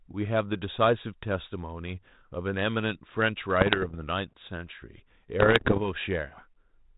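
Bit errors on an ADPCM link corrupt the speech from 3.61 to 3.96 s and, more densely, from 5.40 to 5.81 s. Each flipped bit throws the decoder's step size and predictor off, producing pops and rough bursts with brief level jumps. The underlying band-limited G.726 coding fits a 32 kbit/s link.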